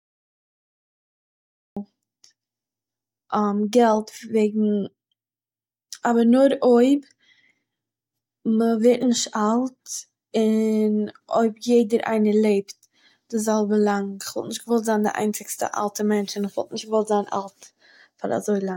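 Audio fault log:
0.00–1.77 s, cut-off start: the track is digital silence until 1.77 s, then the speech enters mid-sound with no natural attack or fade, because capture began late. The waveform shows a flat line ending in an abrupt, already-loud onset; the spectrogram shows a hard vertical edge.
13.37–16.61 s, pre-emphasis left on: after "לעבט די", the treble lift was never undone, leaving highs about 8 dB stronger at 10 kHz than at 1 kHz, which fits a CD-style 50/15 µs curve. It sounds thin, bright and sibilant; the spectrogram shows brighter upper bands.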